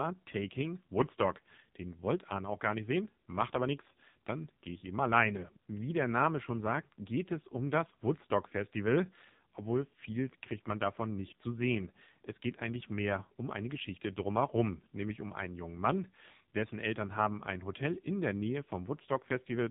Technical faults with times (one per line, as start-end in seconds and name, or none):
0.00-19.70 AMR narrowband mobile codec